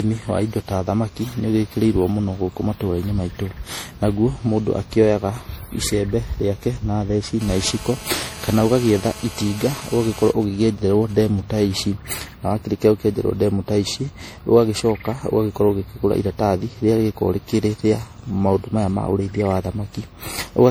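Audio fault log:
Throughout: generation loss. Swirly, hollow, smeared speech with blurred attacks, likely from about ten successive MP3 re-encodes at 64 kbit/s compounding quantisation noise.
7.41 to 10.31 s: GSM phone buzz. Hard, raspy 217 Hz buzz rich in harmonics, about 19 dB below the speech, from a nearby phone in a call whose bursts the circuitry rectifies.
10.43 to 11.75 s: GSM signalling bursts. Even ticks with a longer 217 Hz buzz twice a second, around 30 dB down, as the phone sends sparse bursts while its user is silent.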